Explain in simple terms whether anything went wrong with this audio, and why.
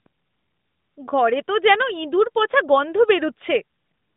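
Nothing went wrong with this audio, which sounds just as an ordinary mobile phone call should.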